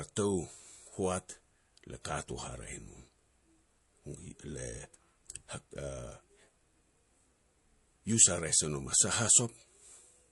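From the start, the speech carries watery, swirling MP3 compression damage, likely from a low bitrate around 48 kbps. A spectrogram shows high-frequency detail flickering on and off frame to frame, while sibilants turn metallic.

At 2.02 to 2.05 s, pre-echo puts a hiss about 29 ms ahead of a sharp onset, raising the noise about 10 dB. The waveform shows a fuzzy lead-in before the attack, which fits a 48 ms transform window with no short blocks.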